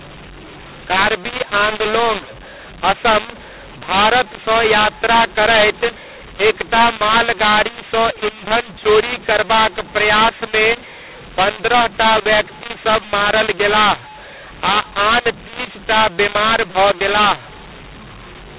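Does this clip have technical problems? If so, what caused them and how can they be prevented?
Yes: throughout, mu-law and A-law are mixed up. The G.711 mu-law coding is decoded as A-law, scrambling levels, making the speech harsh and distorted and filling pauses with noise. Prevent it by making the decoder's companding law match the encoder's, mu-law here.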